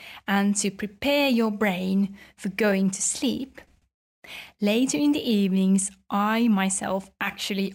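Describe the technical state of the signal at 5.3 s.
At 5.3 s the speech is still carrying the crude rate conversion that runs through the whole clip. Samples were repeated, not filtered, a pattern that fits a 3:2 step from 32 kHz to 48 kHz. This leaves inharmonic fizz roughly 20 dB below the speech, gritty on loud and bright sounds.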